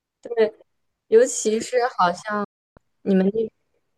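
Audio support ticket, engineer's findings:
Digital broadcast dropout, 2.44 to 2.78 s: speech mutes via an 8 ms fade, about 320 ms gone, consistent with roughly ten frames failing checksum at receiver. Waveform shows short ramp then flat silence; spectrogram a clean full-band blank column.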